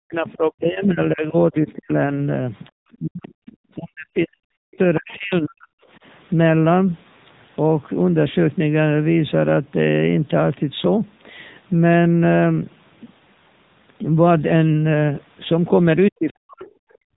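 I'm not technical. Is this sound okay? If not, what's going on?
No. The whole recording went through the AMR narrowband mobile codec, a phone-call compression method. Nothing above about 3.8 kHz survives, so the voice sounds muffled, buzzy and plainly artificial throughout.

Speech suppressed in double talk is the likely cause of the voice dipping or cutting out from 0.0 to 1.99, 2.72 to 3.33, 3.75 to 5.82 and 16.11 to 16.73 seconds. The call's echo control seems to have been confused by both sides talking together, so it turned the talker down.

The other side's voice leaking through is the likely reason a faint second voice can be heard at 1.69 to 1.73, 3.46 to 3.55 and 4.73 to 5.17 seconds. The echo control didn't fully remove the far end's voice.

Background gated by the echo canceller: from 17.01 seconds to the end, the echo control sharply lowers the microphone, so the room sound drops away.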